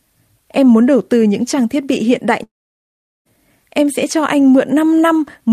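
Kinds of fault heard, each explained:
Long network dropout: Right after "thiết bị hiện đại", at 2.43 s, the speech stops and doesn't return until 3.27 s. That gap is filled for about 0.82 s, and about 0.76 s of it is plain silence. When the speech comes back, it picks up further along, with roughly 0.82 s of material simply gone. That pattern likely comes from packets that never arrived, with the receiver padding the hole until the stream resumed.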